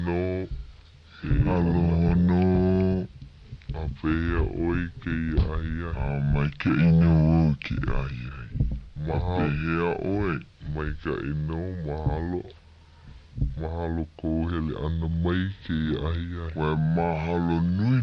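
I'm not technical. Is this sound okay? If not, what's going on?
No. From start to finish, everything sounds slowed down and deeper than it should, running at about two thirds of its proper speed and pitched about seven semitones low. This is a wrong sample rate fault: the audio is being played back more slowly than it was recorded, with no correction. That pattern fits a recording made at 48 kHz being played at 32 kHz. Because speed and pitch are tied together, both drop by the same amount.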